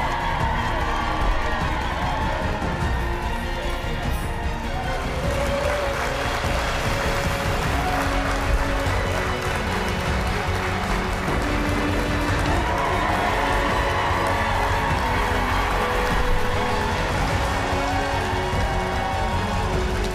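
Nothing stood out on listening to this audio.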